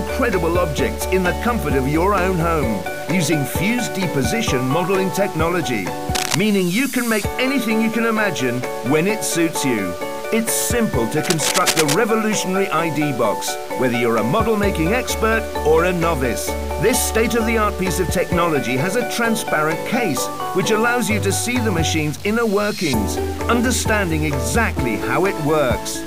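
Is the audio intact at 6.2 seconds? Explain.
No. From 6.14 to 6.41 s there is cable scratch noise: dense, uneven bursts of scratching nearly as loud as the sound, likely from a worn cable or connector being moved. Underneath, a grainy distortion that follows the signal runs throughout. This points to low bit depth without dither, roughly 6 bits with truncation.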